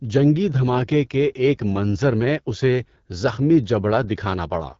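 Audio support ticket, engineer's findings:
Rough, raspy speech throughout the clip. Audio stops near 7 kHz. AMR wideband (HD Voice) codec at a low mode, which fits roughly 8.85 kbit/s. The vocal tract model is coarsely quantised, and the top band is synthetic noise.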